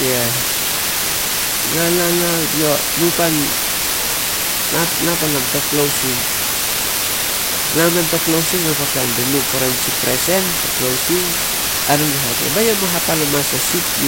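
Low bit depth with dither runs from start to end of the speech. The signal has been reduced to very few amplitude steps, a level of hiss consistent with only 3 bits, and random dither was added before each value was rounded. That turns the rounding error into steady white noise rather than distortion, so the speech sits in a constant, even hiss whose level comes close to that of the speech itself.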